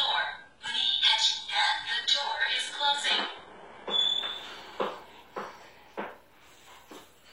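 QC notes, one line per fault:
0.0 to 4.0 s, adaptive stream starting at a low bitrate. The player opens on a cheap version of the stream so playback begins fast. Nothing is present above 11.1 kHz, and the top octave sounds thin and synthetic, with heavier codec smearing. This fits a very low-bitrate HE-AAC stream, around 12 kbit/s. At 4.0 s the quality jumps with no gap, which points to a switch to AAC-LC near 96 kbit/s once the connection was measured.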